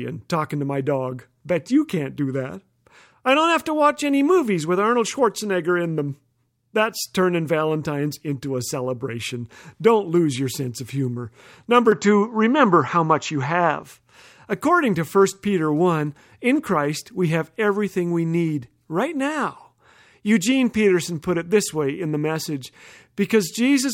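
From 11.92 to 13.83 s the speech turns duller and a little boxier, with no gap at the transition, then clears again. This is most likely an input switched to a poorer device, one that passes a narrower band and has its own gain. On a spectrogram the energy above 7.6 kHz disappears for that stretch, and a faint new noise floor appears far below the speech. On the waveform, the level shifts by a few decibels.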